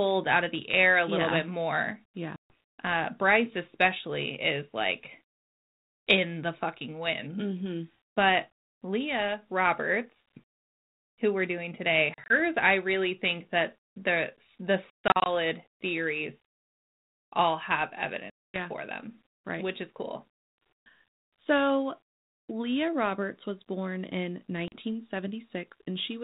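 Speech with five hard-edged silent holes, at 2.36, 12.14, 14.9 s (after "think that the the"), 18.3 s (between "all have" and "for them") and 24.68 s (after "was born in"), each returning slightly distorted. This is packet loss on an ADPCM call: the lost audio leaves the decoder's adaptive predictor and step size out of step with the sender's until they resettle.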